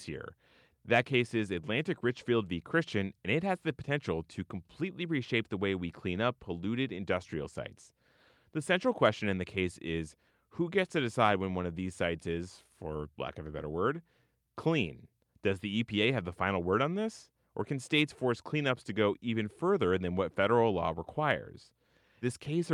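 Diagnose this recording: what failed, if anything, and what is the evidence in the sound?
Nothing in the chain seems to have failed, and the speech comes across without any break, glitch or other technical fault to point to at any stage.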